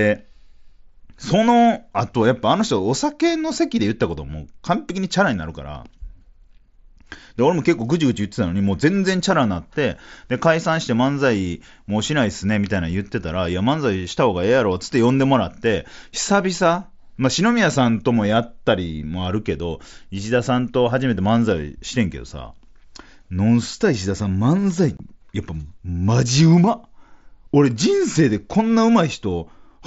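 At 24.97 to 25.00 s, unconcealed Bluetooth headset packet loss: voice packets between headset and phone failed to arrive and nothing filled the gap, so the wideband mSBC speech drops out for about 22.5 ms, which fits three lost packets, leaving a hole with abrupt edges.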